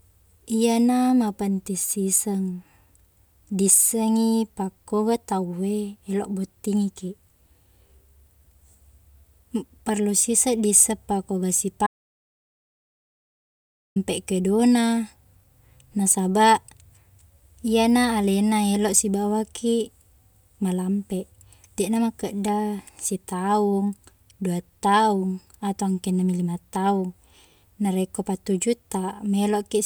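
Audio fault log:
11.87 to 13.96 s, audio dropout to silence: the speech cuts off mid-flow and returns after 2.09 s of silence with no room tone, likely because the input signal was lost while the recorder kept writing silence, so that stretch is gone.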